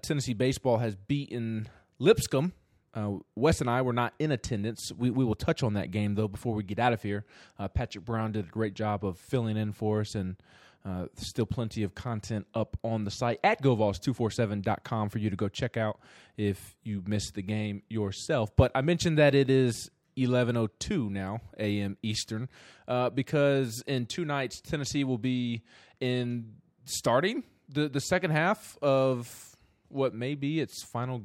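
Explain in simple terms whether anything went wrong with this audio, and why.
Nothing went wrong with this audio, because no fault can be heard anywhere in it.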